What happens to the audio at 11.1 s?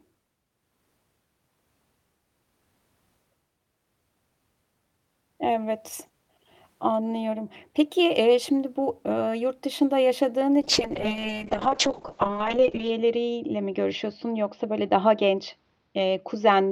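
At 11.1 s you're inside a call bitrate drop running from 10.63 s to the end: the encoder starved of bits, consistent with roughly 40 falling to 6 kbps, so speech turns coarse and watery, with the top end cut from 20 kHz to 8 kHz.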